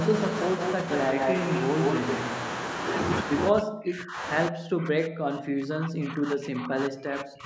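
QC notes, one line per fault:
1.18–1.63 s, echo leak: a copy of the speech trails 168 ms behind at nearly equal level, likely leaked loudspeaker echo. The spectrogram shows doubled, offset harmonic bands.
3.5–4.26 s and 4.49–7.45 s, speech suppressed in double talk: the speech drops by up to about 40 dB, likely echo-canceller muting during overlap. The waveform shows collapsed, gated stretches.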